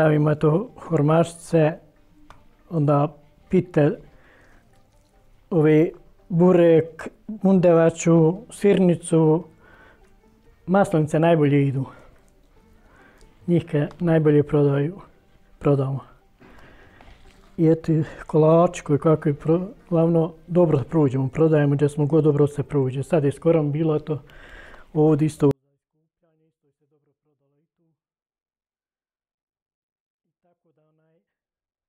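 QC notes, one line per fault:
25.51–31.88 s, 24-bit alignment error (too quiet): 24-bit samples sitting in the low bytes of 32-bit words are probably being read as full 32-bit values. Each sample keeps its shape but lands 8 bits too low in the word, so from 25.51 s to the end the audio stays clean yet drops abruptly by about 48 dB. It becomes nearly inaudible, with no distortion or fade to soften the cut.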